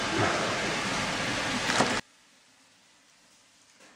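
From 1.25 to 1.46 s there is loose connector crackle. A worn or dirty contact is making and breaking as it moves. Each break chops the signal off for an instant. The result is an irregular burst of crackle and scratching, about a fifth of a second long. It is not a steady tone or a regular click. It sounds like a cable being disturbed.

At 2.00 s the sound suddenly drops by about 31 dB and stays down to the end. The background falls away too. What remains is a quiet residue of the original. The likely cause is one channel inverted. One side of a stereo pair had reversed polarity. When the two sides were summed to mono, the parts they shared cancelled. Only the small differences between them survived.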